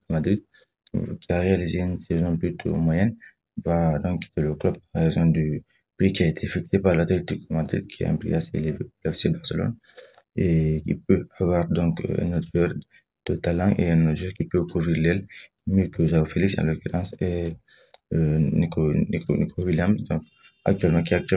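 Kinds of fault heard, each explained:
No audible faults detected.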